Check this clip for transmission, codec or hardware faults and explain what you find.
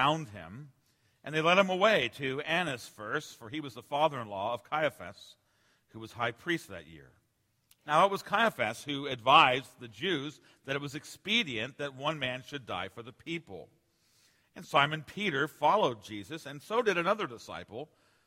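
No transmission, codec or hardware faults turn up anywhere in the clip, and the signal holds steady throughout without dropouts, distortion or interruptions.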